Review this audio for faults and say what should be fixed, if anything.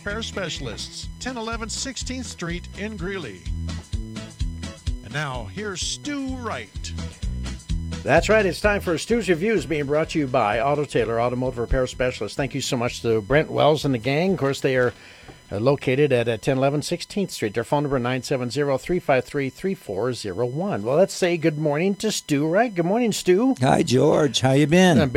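CD scratch ticks, 1.87 to 2.53 s: four sub-millisecond clicks, one per disc rotation, where a blemish overwhelmed error correction and the player concealed the damaged samples. Clean or replace the disc and re-rip it with a secure, verified extraction.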